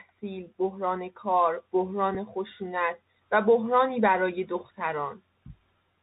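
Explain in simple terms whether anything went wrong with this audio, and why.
Bluetooth CVSD headset codec, throughout the whole clip: the speech went through the narrow audio format that Bluetooth headsets use for calls. This format describes the sound only as a string of tiny up-or-down steps, and it keeps nothing above about 4 kHz, so the voice sounds muffled and phone-like. Its steps can't keep up with sharp, bright sounds, so s sounds come out scratchy, and a fine grainy hiss sits under the speech.

Bluetooth headset packet repeated, at 2.15 s: a tiny slice of sound, just under 4 ms, went missing between the headset and the phone. The sound points to a single lost chunk. Rather than leave a gap, the chip played the previous chunk a second time to fill it. Because this happened only once, it doesn't become a buzz. You hear a brief small tick at that moment.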